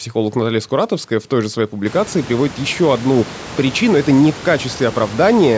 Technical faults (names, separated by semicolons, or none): none